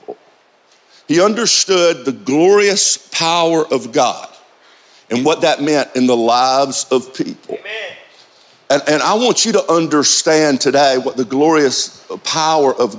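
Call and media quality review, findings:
Gain pumping, throughout. Input gain likely set far too high for the mic, so a fast limiter or compressor clamps down on every loud sound and releases in the gaps. Audible result: level swinging roughly 5 dB. Dynamics squashed, loud and soft parts pressed close together. Call mic processing band-limits everything to 8 kHz, with the pumping riding on top.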